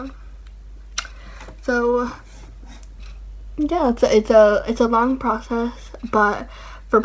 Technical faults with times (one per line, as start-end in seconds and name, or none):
none